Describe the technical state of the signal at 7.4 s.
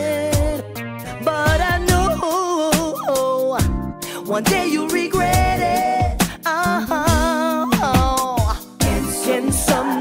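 At 7.4 s the signal is intact, with no dropout, distortion or other technical fault at that moment.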